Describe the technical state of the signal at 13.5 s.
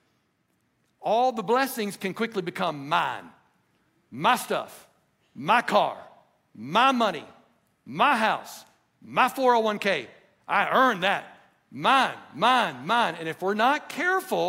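At 13.5 s the speech signal is intact, with no audible technical fault at that moment.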